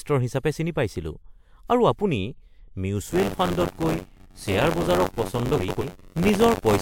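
From 3.10 s to the end of the speech, a steady robotic buzz at about 94 Hz rides on the sound, and it is present only while there is signal. This is buffer tearing: the writing program and the reading hardware have drifted until they cross inside every period. That rate fits a 512-sample buffer. In each buffer, roughly 15% of the audio is left over from about 40 ms earlier, with hard joins at both edges.

Within that stretch, from 5.56 s to 5.83 s, a garbled flutter breaks through. These are frames out of order. Two neighbouring blocks of about 128 ms each were decoded in swapped order, so that short passage plays with its halves exchanged, which fits runs of three frames apiece. Nothing is lost in time, and the speech stays in sync afterwards.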